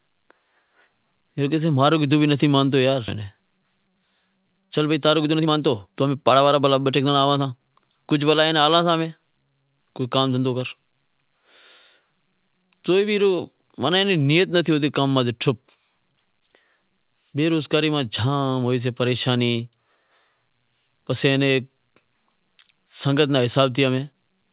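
At 3.08 s, right after "مانتو یار", a skip ahead occurs: roughly a second of speech was dropped and playback jumps straight on with no gap filled. On a waveform the two sides butt together; a spectrogram shows an abrupt discontinuity in formant tracks.

From 4.63 to 7.53 s, ending just before "کجھ بھلا ایئے ناں", a jitter buffer speed-up removes short pitch-period slices repeatedly to drain excess delay, about half a second in total. The speech runs at 117% speed at unchanged pitch and sounds hurried. The spectrogram shows compressed syllable timing with steady harmonic spacing. The whole band stops at 4 kHz, which fits a G.711 call path.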